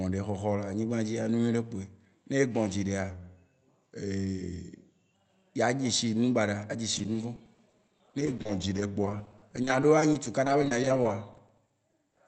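Drift correction step, 3.10 to 5.14 s: the speech slows by about 6% and drops roughly a semitone (108 cents), then snaps back just before "yea dze shi nu", likely from clock-matching software changing the playback rate.

Repeated packet loss (robotic sound), 6.96 to 12.21 s, starting after "a dze": dozens of short holes, none over 40 ms, are patched by extending the preceding sound. About 18% of the stretch is filled in, so the speech sounds choppy with pieces missing.

Drift correction step, 8.38 to 9.07 s, inside that lossy stretch: the same rate step recurs, with a brief slowdown of about 6% and the same drop of about a semitone, again likely from a buffer-matching adjustment. The call codec's band limit near 8 kHz stays present throughout.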